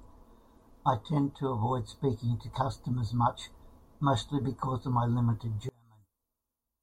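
From 5.69 s to the end of the clip, the speech abruptly collapses to a near-silent remnant, dropping by about 33 dB and staying that faint for the final second or so. The likely cause is one channel inverted: with one stereo side flipped in polarity, the centred speech common to both channels cancels when they are summed to mono, leaving only the small difference between them.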